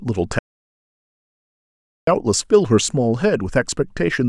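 Speech clip with an audio dropout to silence from 0.39 to 2.07 s: about 1.7 s goes to silence, no room tone, likely a lost input or link.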